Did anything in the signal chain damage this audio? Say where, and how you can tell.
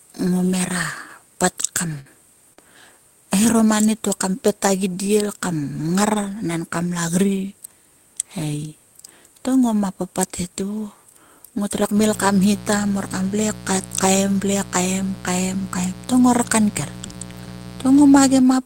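Yes. At the network stage, a burst of packet loss hits just after "hera pat kam", from 1.99 to 2.08 s. About 59 ms is filled by the receiver extending and fading the last sound, and about 60 ms of speech is skipped. Unlike a brief concealed loss, the audio resumes further on rather than blending back.

Also in the network stage, a short concealed packet loss runs from 2.53 to 2.60 s. Around 36 ms of synthesised continuation covers the hole before blending back, leaving a brief smear rather than a held buzz. About 40 ms of audio is missing.

Inside that span, the codec shows a lost packet rebuilt from error correction at 2.57 to 2.59 s. The 20 ms frame was played from its low-bitrate copy in the next packet. It sounds rougher and noisier, but there is no gap and no fade.

In the analogue wiring, mains buzz runs from 11.9 to 18.4 s. It is a steady, raspy drone built on 60 Hz, with harmonics reaching into the kilohertz range, sitting roughly 15 dB below the speech. 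The rasp and high harmonics set it apart from a smooth hum.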